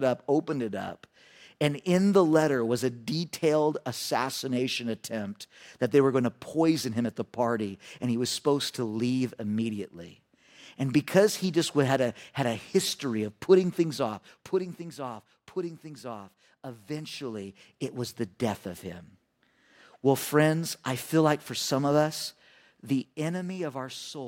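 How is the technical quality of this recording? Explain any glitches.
Good news: there aren't any glitches to explain here, since nothing in this speech recording comes across as a technical fault.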